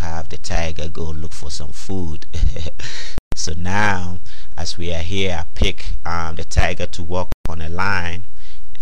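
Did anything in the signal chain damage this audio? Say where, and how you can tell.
Yes. There's a gap at a join of encoded pieces, twice: a hole of about 0.14 s from 3.18 to 3.32 s, and another of about 0.13 s from 7.32 to 7.46 s, four seconds apart. The sound cuts out with smeared edges and then picks up exactly where it left off. That's the codec stage: chunks encoded separately and butted together untrimmed, so each join keeps the encoder's start-up delay and last-frame padding.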